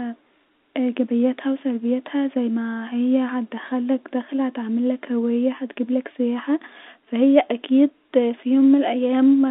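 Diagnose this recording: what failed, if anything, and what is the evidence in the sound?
Nothing failed; no faults heard.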